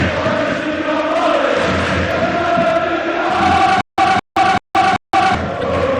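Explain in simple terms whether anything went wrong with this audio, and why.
Something did go wrong, twice. From 3.81 to 5.35 s there is a stutter with silent gaps. A short burst of about 214 ms plays, then about 171 ms of dead silence. This repeats four times, every 385 ms. The player most likely stalled and kept replaying its last piece. The sound meant for that stretch is gone.

At 5.58 to 5.64 s there is damaged data in a compressed stream. You hear a brief blip, about 56 ms long. Part of the file was broken there. The decoder misread it, lost its place, and jumped ahead to the next readable chunk.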